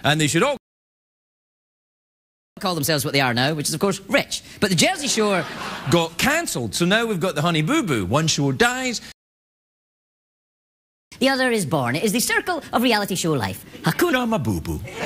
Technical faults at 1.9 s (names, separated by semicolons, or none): playback stall